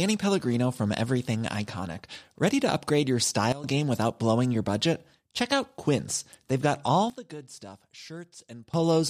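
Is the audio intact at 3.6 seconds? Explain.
No. A sudden gain jump runs from 3.52 to 3.64 s. The level drops by about 16 dB in a single step, speech and background noise together, with no fade. This likely comes from a gain change applied without a ramp, sample to sample.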